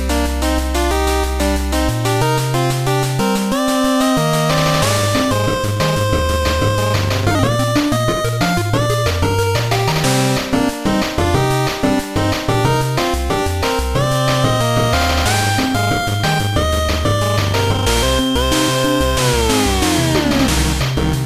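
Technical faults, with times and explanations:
14.03 to 21.25 s, feedback whistle. A thin, steady tone at 3.2 kHz appears and holds to the end of the clip. It sits about 15 dB below the main sound and swells and fades slowly in level. It never grows or runs away. The likely cause is a loudspeaker-to-microphone loop held just at the edge of feedback. That keeps one high frequency ringing on its own, so it stays faint but never stops.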